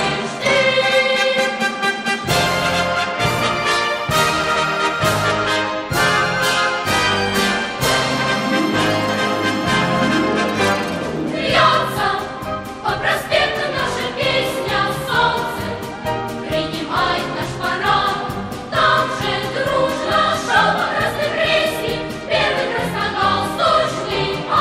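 Nothing goes wrong anywhere in the recording; there's no technical fault to point to at any moment.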